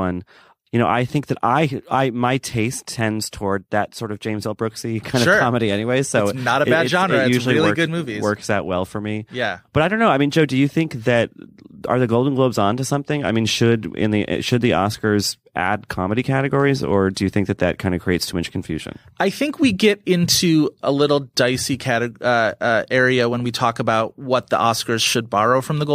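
Nothing technical goes wrong anywhere in this speech recording, so there's no fault to point to at any moment.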